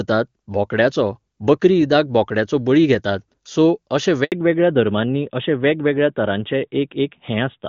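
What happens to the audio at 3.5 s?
Nothing goes wrong at 3.5 s: the speech carries on intact through that moment, with the wideband AMR coding at its top rate leaving at most faint damage there.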